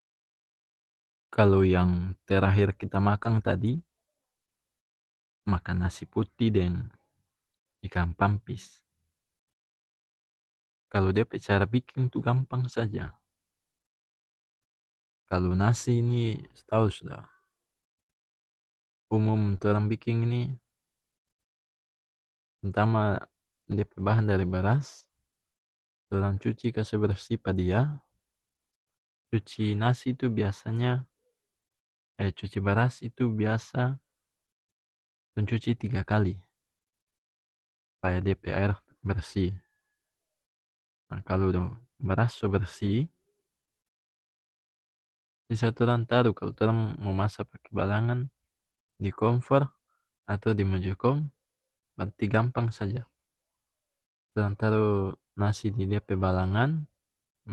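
Speech sent over an Opus call path, band-limited to about 12 kHz, suffers short concealed packet loss twice. At 19.57 to 19.61 s and again at 25.07 to 25.11 s, roughly 20 ms of audio failed to reach the decoder in time. The receiver covered each hole by extending the preceding sound and then blending back into the real signal. Each spot is heard as a brief smear or wobble lasting a few hundredths of a second rather than as a clean gap. Just before the second of these, at 24.99 to 25.05 s, a lost packet was rebuilt from error correction, and the 40 ms span fits two packets. Opus in-band forward error correction let the decoder play the low-bitrate copies carried in the following packets. That spot has no dropout, but it sounds rougher and noisier than the surrounding speech, so the two faults together leave a grainy patch just after 25 s.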